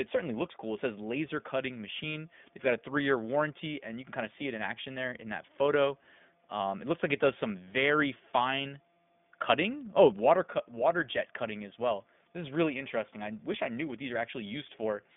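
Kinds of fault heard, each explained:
iLBC codec: the speech is coded at 15.2 kbps in self-contained 20 ms frames with nothing above 3.7 kHz, leaving it dull, plainly rough and synthetic.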